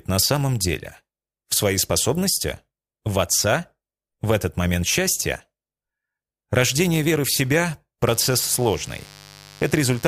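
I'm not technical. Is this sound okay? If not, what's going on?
No, not quite. From about 8.07 s to the end there's a mains buzz, a steady raspy hum sitting fairly low under the sound. Electrical interference from the 50 Hz power supply, say from a dimmer or a poorly shielded cable, leaked into the recording.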